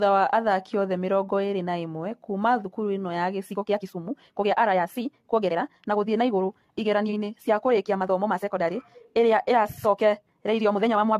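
Generation loss runs through the whole recording. The speech has a swirling, hollow quality with smeared consonant attacks and nothing above 14 kHz, more degraded than a single lossy pass would leave it. The likely cause is repeated AAC decoding and re-encoding, perhaps around seven times, at a rate that fits 64 kbit/s. Each pass quantises again on a shifted frame grid, so the noise and spectral gaps pile up.

A time-stretched section begins at 3.44 s and lasts to the end. The pace jumps suddenly to about 1.77 times the earlier rate, but the pitch stays where it was. The result sounds hurried. This is likely software compressing the audio to fit a shorter length, keeping pitch steady by discarding short slices of the signal instead of simply playing it faster.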